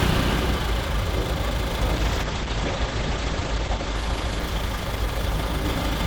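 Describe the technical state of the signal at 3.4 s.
At 3.4 s we're inside a call bitrate drop running from 1.96 s to the end. The audio sounds consistent with the encoder being starved from roughly 128 down to 10 kbps, so it codes coarsely and cuts the top end from 20 kHz to 8 kHz, leaving a rough, muffled sound.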